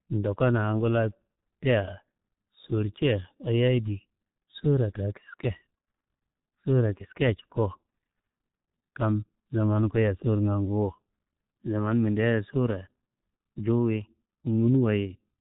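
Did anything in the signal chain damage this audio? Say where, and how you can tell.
Yes. The speech has passed through a G.723.1 codec. It runs muffled and hoarse throughout, with nothing above 3.8 kHz and smeared consonants. The heavy damage points to a stream of roughly 6.3 kbit/s, where slow 30 ms model updates cannot follow rapid articulation.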